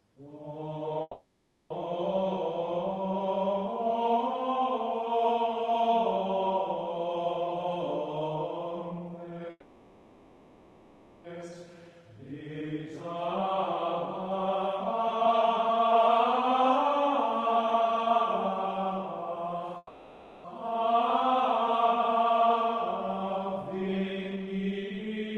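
Call audio freeze, 1.01 to 1.72 s: the sound stalls and is carried on as a fading buzz or hiss for 0.69 s, with a brief silence of about 20 ms. It then resumes exactly where it stopped. The likely cause is delayed packets draining the jitter buffer, so a gap is inserted but nothing is lost.

Jitter buffer speed-up, 7.46 to 9.50 s: the audio plays 21% fast at unchanged pitch and sounds hurried. The receiver repeatedly cuts out short pitch-period slices, roughly 0.4 s in total, to shed the excess delay that has built up in the buffer.

Call audio freeze, 9.50 to 11.26 s: a longer 1.74 s fill, with about 30 ms of silence, decays before the sound picks up again. This is likely the same stall in packet arrival.

Jitter buffer speed-up, 11.66 to 19.74 s: a milder 8% rush trims about 0.7 s.

Call audio freeze, 19.77 to 20.46 s: another 0.67 s fill, with about 30 ms of silence, likely from held-up packets.

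Jitter buffer speed-up, 20.86 to 25.36 s: a 16% speed-up removes about 0.7 s.

Throughout the clip the high end stops around 12 kHz, which fits a super-wideband Opus call codec.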